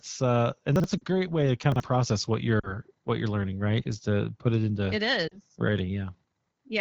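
Chunks out of order at 0.76 to 0.84 s and again at 1.72 to 1.8 s: a 40 ms block of the speech plays one chunk later than it should, swapped with its neighbour. Nothing goes missing, but the hard joins cause a brief jumbled stutter.

Lost AMR speech frames at 0.98 to 1.05 s, 2.59 to 2.75 s and 5.28 to 5.38 s: each gap of about 40 ms, which fits two dropped frames, is filled by the wideband decoder repeating its last good settings at falling gain. The result is a short drop to near silence before the speech returns briefly weak or rough.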